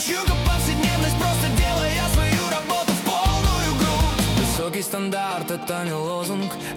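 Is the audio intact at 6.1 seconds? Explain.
No, at 6.1 s the audio is marked by GSM signalling bursts, which run from 5.39 to 6.72 s. A nearby 2G phone is signalling, and the audio circuit rectifies its short radio bursts into a galloping dit-dit-dit of brief buzzes repeating at 217 Hz, roughly 20 dB below the wanted sound. On a spectrogram this shows as grouped vertical striations with a comb of harmonics spaced 217 Hz apart. The waveform shows clusters of sharp, evenly spaced spikes.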